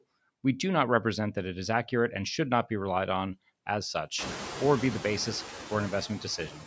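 All the way through there are noise suppressor artifacts: the suppressor treats the steady background as noise and pushes it down by about 16 dB, frame by frame. That leaves it pumping between phrases and rising under the speech, especially once the room noise jumps by about 25 dB around 4 s. From 6.38 s to 6.67 s there's speech cut by the noise suppressor. It mistakes the tail end of the speech for noise and dips it by up to about 11 dB, so roughly 150 ms of it sounds swallowed.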